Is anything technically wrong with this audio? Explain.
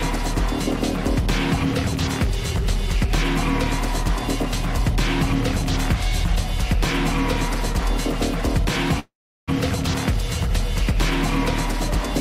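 Yes. There is one call audio freeze, from 8.99 to 9.50 s. The last sound before it is stretched into a brief fading buzz or hiss, then drops to silence for about 0.37 s. The likely cause is packets held up in transit, so the receiver's jitter buffer ran empty and it filled the gap itself. When the audio resumes, it picks up exactly where it stopped. Nothing is lost, but everything after is delayed by about 0.48 s.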